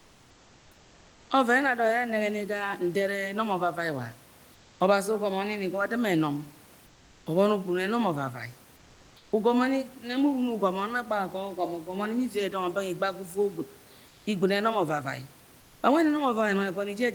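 Comfort noise in place of the background appears at 0.0 to 1.3, 4.54 to 4.80, 6.86 to 7.26, 8.76 to 9.32, 14.08 to 14.26 and 15.60 to 15.82 s. In these pauses the room background becomes a flat, featureless hiss, about 1 to 3 dB quieter. The likely cause is discontinuous transmission, with the receiver filling each gap with synthetic noise.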